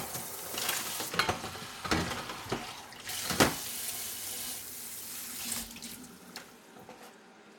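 From 1.09 to 3.09 s the audio goes dull and muffled, a clear case of de-emphasis applied wrongly: a treble-cutting curve either hit material that had no pre-emphasis to undo or was applied twice, so the top rolls off smoothly, down about 11 dB at 10 kHz relative to 1 kHz.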